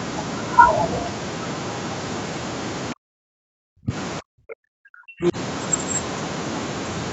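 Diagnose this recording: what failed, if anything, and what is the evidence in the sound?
The call processing stage most likely failed at the echo canceller, which mistook simultaneous talking for loudspeaker echo and suppressed the near-end talker. The sound drops out twice, from 2.93 to 3.94 s and from 4.2 to 5.36 s, each time for about a second. At its deepest the level falls by about 40 dB, so the talker fades almost to nothing rather than dipping slightly. Apart from the call's normal 8 kHz Opus band limit, the suppression is the clear defect.

The same echo canceller likely also let some of the far-end loudspeaker signal through to the microphone. This other side's voice leaking through appears as a brief scrap of a second voice from 5.23 to 5.32 s, near the end of the second dropout. The canceller did not model and subtract that moment of echo, so it reached the outgoing audio as a short fragment instead of being removed.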